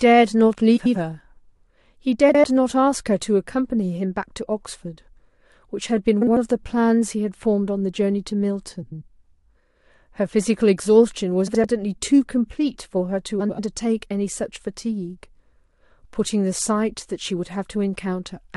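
Frames out of order occur at 0.76–0.96, 2.29–2.44, 6.21–6.37, 8.82–9.03, 11.47–11.64 and 13.40–13.59 s. Each time, two neighbouring stretches of the speech play in swapped order, which fits runs of about four frames. This produces a garbled flutter, and no time is lost.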